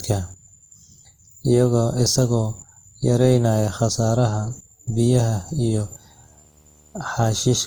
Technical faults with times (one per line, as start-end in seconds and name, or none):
0.00-7.66 generation loss
5.46-7.46 video or display buzz